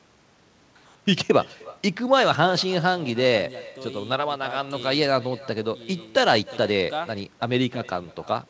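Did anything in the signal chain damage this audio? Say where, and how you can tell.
Yes, at the call-processing stage: an echo with no canceller. Throughout, each phrase returns roughly 300 ms later, about 22 dB quieter and thinner. The far end's loudspeaker fed its microphone, and nothing removed that echo. The band stops at 8 kHz, which fits a wideband call codec.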